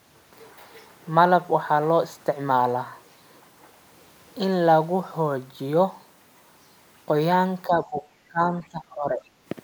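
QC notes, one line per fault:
7.67–8.03 s, speech suppressed in double talk: the echo canceller likely mistook overlapping far-end talk for echo and ducked the speech by around 15 dB.
8.28–9.21 s, speech suppressed in double talk: same failure, deeper and longer; about 20 dB of attenuation pulls the speech down for roughly 0.7 s.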